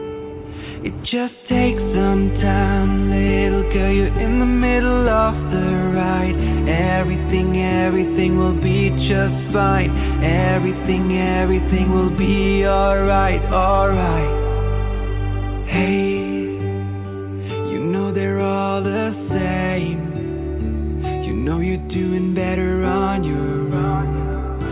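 Nothing in the signal points to a technical problem at any point in the recording.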